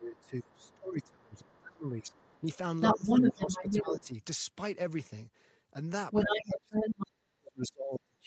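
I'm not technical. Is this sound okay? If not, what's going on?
No. Two things go wrong, both tied to a second person being heard at the same time.

First, speech suppressed in double talk. The talker's voice drops sharply from the start to 2.46 s, again from 2.94 to 4.13 s, and from 6.25 s to the end. The last stretch drops the deepest. Both sides were likely talking at once, and the call software turned everything down.

Second, the other side's voice leaking through. A second voice is audible at 0.17 to 0.75 s and at 1.34 to 1.6 s, very faintly. From 1.99 to 4.14 s it is louder than the talker. It is a bit louder again from 6.11 to 7.06 s, with a faint blip at 7.63 s. The other side was likely playing on a loudspeaker, and the microphone picked it up.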